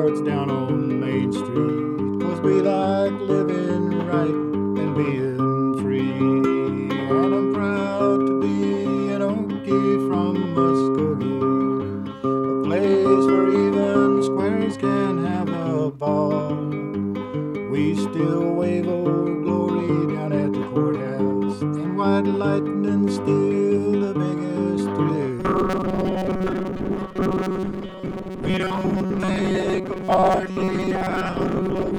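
From 25.4 s to the end, the audio turns into robotic sound from repeated short buffers. It becomes a rigid, metallic buzz at 188 Hz. Most of that stretch is repeated material. This is likely a buffer of about 5.3 ms replayed while new audio arrived too late.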